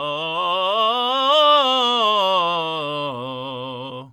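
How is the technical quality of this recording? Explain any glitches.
No glitches can be heard in this music recording. There is nothing in it that needs explaining.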